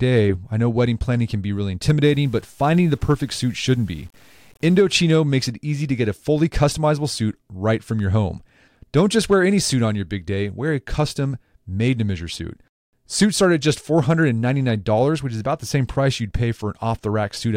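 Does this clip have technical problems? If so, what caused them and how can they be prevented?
Yes. From 2.04 to 4.78 s the speech turns grainy, with distortion that tracks the voice and sits roughly 35 dB down. That's low bit depth without dither, likely truncation to about 8 bits. To prevent it, keep full resolution and dither any reduction.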